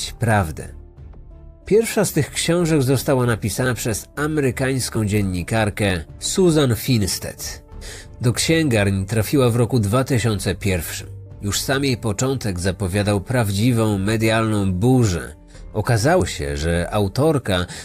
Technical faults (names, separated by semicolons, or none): dropped buffer (overrun)